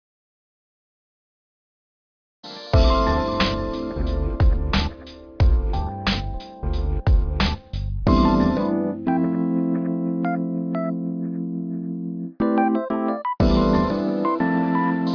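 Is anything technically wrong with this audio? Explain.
No, the signal shows no technical faults at any point in the recording.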